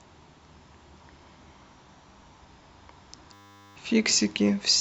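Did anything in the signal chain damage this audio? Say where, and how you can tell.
Yes. The damage comes from the driver or buffer stage, as a system hang loop from 3.33 to 3.76 s. The speech gives way to a steady 100 Hz buzz. That tone comes from a single 10 ms slice of audio repeating exactly, which points to a very short ring buffer. The host stalled, but the hardware kept replaying that slice. When playback recovers, about 0.4 s of speech is missing.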